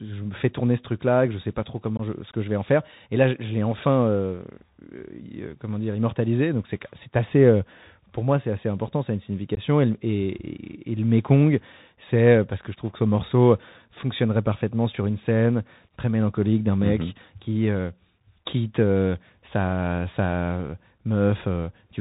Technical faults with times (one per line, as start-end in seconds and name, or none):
0.00-22.01 Bluetooth CVSD headset codec
1.97-2.01 unconcealed Bluetooth headset packet loss
9.55-9.59 unconcealed Bluetooth headset packet loss